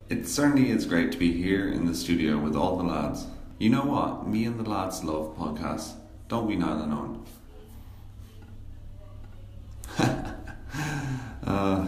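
No technical faults can be heard anywhere in this recording; the signal stays steady and intact throughout.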